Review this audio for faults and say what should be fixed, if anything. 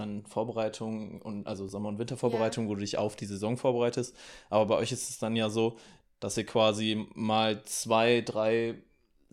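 Two short clicks break into the speech, at 1.69 s and a slightly buzzier one at 7.73 s. Both are a repeated buffer. New audio arrived late, so a 2.67 ms piece, which fits a 128-sample buffer, replayed once and then three times. The repeats replaced a few milliseconds of sound. A larger playback buffer or higher priority for the audio thread would prevent these underruns.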